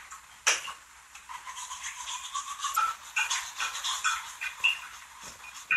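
A brief glitch interrupts this recording of sounds from 2.73 to 2.78 s, lasting about 44 ms before the audio carries on. It comes from damaged data in a compressed stream: a short stretch of the encoded file was corrupted, so the decoder misinterpreted or discarded the affected frames, lost its place in the bitstream, and did not produce proper output until it locked onto the next valid frame header.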